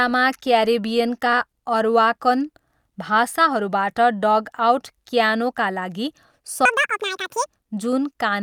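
Right after "क्यानोका लागि", from 6.65 to 7.46 s, speech turns high and hurried: a section at the wrong speed, playing twice as fast, likely from a mismatched clock.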